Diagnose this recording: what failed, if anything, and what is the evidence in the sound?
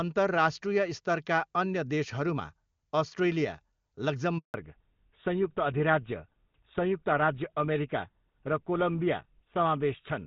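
Network stage: a handover gap at 4.38 s. The speech cuts out and stays silent for 160 ms while the call switches networks, then resumes at 4.54 s.

Codec stage: a fallback to narrowband from 4.54 s to the end. The clean HD Voice sound drops to nothing above 4 kHz and turns duller and rougher, which fits GSM full rate.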